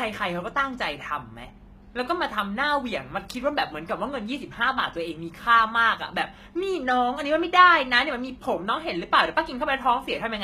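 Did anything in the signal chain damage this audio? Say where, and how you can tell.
Yes, at the codec stage, and the damage runs through the whole speech clip. The treble stays bright, but s sounds come out gritty and metallic, lispy rather than crisp. That points to likely HE-AAC compression at a rate that fits roughly 20 kbps. Only the lower band is coded, and the top is rebuilt by copying lower bands upward, so harmonics fail to line up across the crossover. A plain low-pass or band-limited codec would dull the top instead of faking it.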